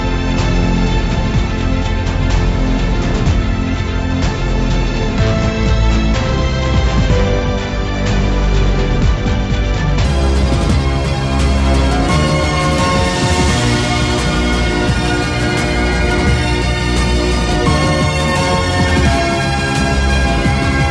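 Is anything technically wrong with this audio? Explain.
Yes. A wrong sample rate fault runs from 10.05 s to the end. The samples are played faster than they were captured, with no conversion, which fits 16 kHz material played at 22 kHz. The audio speeds up about 1.38 times and rises about 5.5 semitones, sounding high and hurried.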